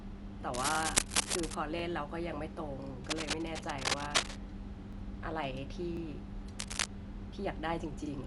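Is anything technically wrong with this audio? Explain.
Yes, there are three faults. Throughout, the speech sounds dull and band-limited, with rough, fluttering noise clinging to tonal parts. This is likely Dolby Digital compression at a bitrate around 64 kbps: empty high-frequency lines get filled with dither noise. Unlike MP3-style swirl, the damage is a grainy, noisy fill rather than metallic warbling.

Cable scratch noise appears from 0.54 to 1.54 s, where it is a few dB louder than the speech. It returns from 3.04 to 4.40 s and from 6.59 to 6.86 s, roughly level with the speech. A loose contact changing resistance as it moves likely produces this. The bursts are irregular and rustling, not evenly spaced like the ticks below.

Overlapping chunks cause a 44 ms stutter at 0.75, 1.79, 2.84, 3.88, 4.93, 5.97, 7.01 and 8.06 s. Each one-second chunk starts before the previous one ends, so a short slice replays at every join. 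The strict one-per-second rhythm separates this from random dropouts or glitches.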